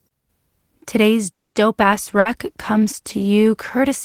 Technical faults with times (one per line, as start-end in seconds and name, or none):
1.33-1.56 call audio freeze
1.82-4.05 call bitrate drop
2.19-2.28 burst of packet loss